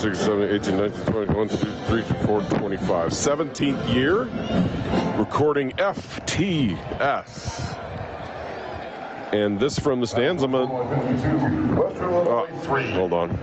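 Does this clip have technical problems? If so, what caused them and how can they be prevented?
Yes. Gain pumping runs through the whole clip. The gain swings by around 15 dB, so loud and quiet parts sit unnaturally close in level and the sound feels squashed. The likely cause is input gain set far too high, with a fast limiter or compressor clamping down on each peak and releasing in the gaps. Nothing above 8 kHz comes through, which fits the call's codec. To prevent it, lower the microphone gain so the limiter rarely engages.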